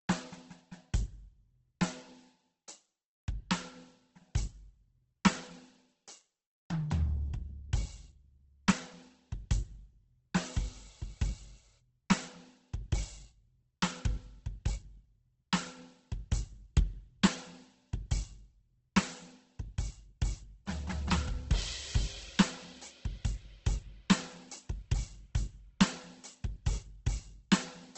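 Opus compression runs throughout this music clip: nothing remains above 8.1 kHz, and tones sound heavily grainy, rough and noisy. The likely cause is an encoder starved of bits, refilling bands with folded or noise content, consistent with roughly 12 kbps in CELT mode.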